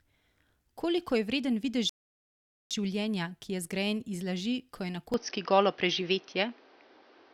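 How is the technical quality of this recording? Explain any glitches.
The recording has two clear faults: a playback stall partway through and an abrupt drop in fidelity for the last couple of seconds.

From 1.89 s to 2.71 s there is a rebuffering stall. After "je vreden videz" the sound stops dead for about 0.81 s, then picks up with "življenja ki je zgrajen" exactly where it left off. The player exhausted its downloaded audio and waited for more data, so nothing is missing but time is inserted. On a waveform this is a flat line; on a spectrogram, an empty vertical band.

From 5.14 s to the end, right after "laži ko je na", the speech suddenly turns duller and boxier with no gap at the change. The likely cause is an input switched to a poorer device, one with a narrower passband and its own gain and noise. Nothing above 6.2 kHz survives, the level shifts by about 5 dB, and a new noise floor sits roughly 30 dB below the speech. 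A spectrogram shows the upper band abruptly cut off at 6.2 kHz, with a faint, continuous haze beneath.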